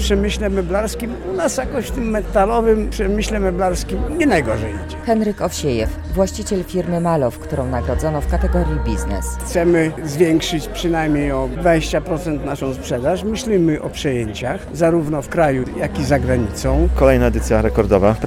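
Nothing is technically wrong with this clip.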